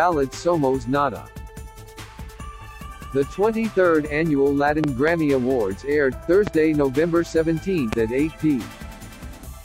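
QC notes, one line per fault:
4.84–5.10 s, 6.47–6.50 s and 7.93–7.95 s, loud pop: a double pop, then two single pops, jump well above the sound, which continues underneath. A sudden voltage step is likely, from a plug, switch or static. The following circuits shape it into a sharp thump.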